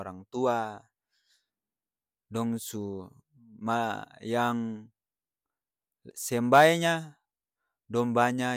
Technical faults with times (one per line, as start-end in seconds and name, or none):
none